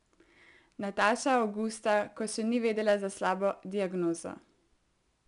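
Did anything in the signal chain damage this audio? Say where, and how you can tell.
Yes: 4-bit ADPCM compression at the codec stage, throughout the speech. Loud syllables carry a gritty hiss that tracks their level, because each sample is a coarse adaptive step from a prediction. Nothing sounds above 10.6 kHz, which fits a sample rate near 22 kHz.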